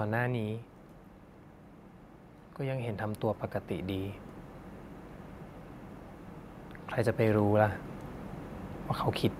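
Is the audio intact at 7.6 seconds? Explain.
No. At 7.6 seconds the clip is in the middle of an automatic gain rise, running from 6.96 to 7.85 s. The gain control judged the input too quiet and lifted it gradually, by about 4 dB. Speech and background noise swell together.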